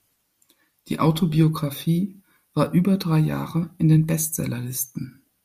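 Speech recording; no technical faults detected anywhere in the clip.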